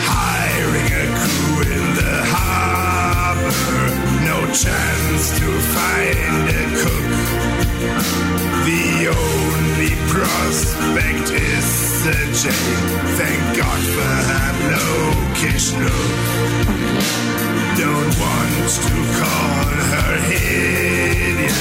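From 13.70 to 17.70 s an adaptive stream at a lower bitrate takes over: treble above about 14.9 kHz vanishes and the top turns synthetic, as a drop from roughly 96 to 20 kbit/s would do. Unlike a dropout, nothing goes silent; quality switches abruptly and returns.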